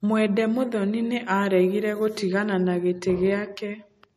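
From start to finish the speech sounds dull and smeared, with a swirly, watery quality and nothing at all above 14 kHz. The top end stops abruptly rather than fading. This is likely low-bitrate audio saved at a high bitrate: the artefacts and cut-off point to an earlier MP3 encode near 40 kbit/s, later re-encoded as a much larger MP3. The second pass cannot restore what the first discarded.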